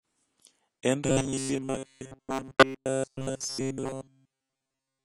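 From the start, the speech carries AAC compression damage that is plainly audible. The upper frequencies are cut off, so consonants sound dull. The encoder has likely quantised the spectrum coarsely against its hearing model, which fits AAC-LC at a low rate around 32 kbps. The starved bands leave a smeared, fizzy texture on sibilants and held vowels.

From 1.06 s to the end of the clip, the speech turns into a robotic sound from repeated short buffers, a rigid metallic buzz at 133 Hz. That pitch fits a block of roughly 7.5 ms being played over and over. The likely cause is new audio arriving too seldom, so playback loops the last fragment while most of the real signal is skipped. The buzz stays fixed at that pitch while the speech underneath still roughly follows its own rhythm.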